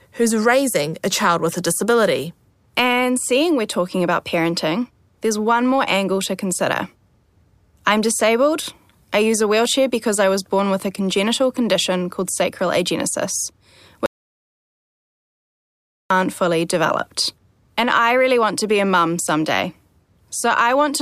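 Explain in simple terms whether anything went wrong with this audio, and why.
Something did go wrong here. At 14.06 seconds, just after "condition called sacral agenesis", the speech cuts out completely. This is an audio dropout to silence. For about 2 seconds there is nothing at all, not even the faint background hiss of the room. The sound returns at 16.10 seconds with "fully developed". The likely cause is that the input was briefly lost, perhaps through a loose connection or an accidental mute, while recording carried on. Whatever was said in that gap is gone.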